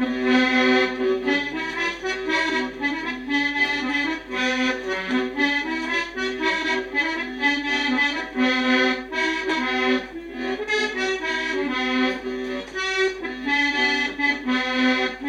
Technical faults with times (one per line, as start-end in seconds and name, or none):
none